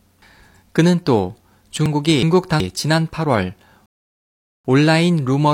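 Chunks out of order from 1.86 to 2.60 s garble this speech recording: a segment of about 370 ms arrives one chunk late and plays after the material meant to follow it, so the passage sounds jumbled, with three hard joins. A rebuffering stall follows at 3.86 s, when playback runs dry and drops to silence for about 790 ms before resuming at 4.65 s exactly where it stopped, adding time without losing any of the speech.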